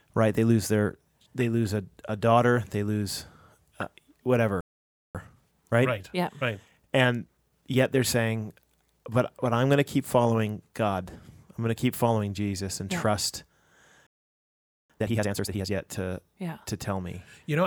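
At 4.61 s the speech just cuts out and stays silent until 5.15 s, a gap of about 0.54 s. That's a playback stall: the output goes dead in mid-flow, most likely because the player ran dry of buffered data or its thread got held up. Right after it, from 5.15 to 8.15 s, you get time-compressed catch-up. The player trims its backlog by splicing out small slices and cross-fading the joins, so the speech runs about 1.15 times fast at normal pitch.

The pattern repeats later and harder. Another playback stall drops the sound from 14.07 to 14.90 s, about 0.83 s of silence, again likely a starved buffer or blocked playback thread. The catch-up that follows, from 14.90 to 15.72 s, runs at double speed. Pitch still holds, but the speech sounds clearly rushed.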